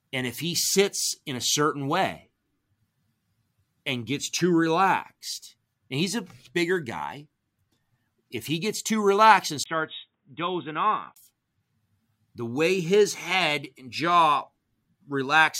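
Input switched to a poorer device from 9.64 to 11.16 s in this speech recording, right after "gets too relaxed and". A 20 ms gap precedes dull, quieter sound cut off above 3.8 kHz with new background noise, likely from a change of microphone.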